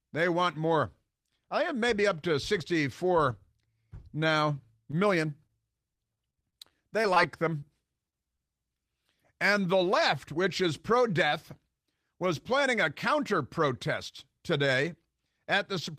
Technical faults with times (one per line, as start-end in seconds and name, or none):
5.47-5.51 short stall from a late packet
5.95-7.18 repeated packet loss (robotic sound)
7.60-8.39 repeated packet loss (robotic sound)